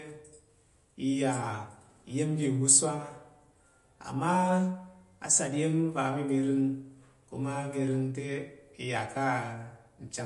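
From start to finish the speech carries plainly audible MP3 compression damage, likely from an encoding at a low bitrate, with the loss consistent with something near 48 kbps. Nothing is present above 11.2 kHz, so the very top of the sibilance is gone. Starved of bits, the encoder discards quieter spectral detail that flickers in and out between frames, giving the voice a watery, swirling texture, with chirpy metallic edges on s sounds and softened consonant onsets.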